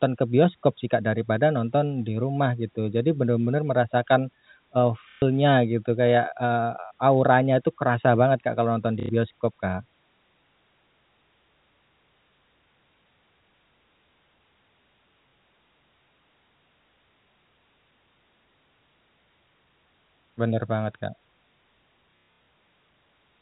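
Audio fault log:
5.11–5.22 s, packet loss with last packet repeated: 120 ms of audio went missing between "merasakan eee" and "gitu kayak". The receiver filled the gap by replaying the last packet, so the sound stutters robotically.
9.00–9.09 s, packet loss with last packet repeated: a 90 ms gap is filled with repeats, giving a short buzzy stutter.
15.30–15.33 s, packet loss with last packet repeated: 30 ms lost, heard as a single small blip.
22.11–22.47 s, packet loss with last packet repeated: 270 ms is lost in pieces scattered over 360 ms, the longest run 120 ms. Looped segments produce a rough buzz near 33 Hz, which fits 30 ms packets.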